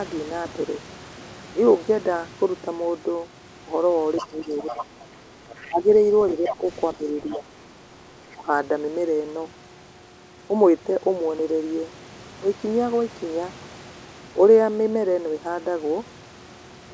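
Speech, carried with no content above 8 kHz, which fits a wideband call codec such as G.722. Other side's voice leaking through appears at 4.16–4.84 s, 5.6–6.56 s, 7.33–7.37 s and 8.31–8.36 s, well below the talker and fainter later. The likely cause is an echo canceller that left loudspeaker pickup in the microphone. Speech suppressed in double talk follows at 4.22–4.87 s, 5.66–7.47 s and 8.34–8.47 s, where the talker dips by roughly 10 dB and nearer 20 dB in the last instance, likely as the canceller turns both voices down.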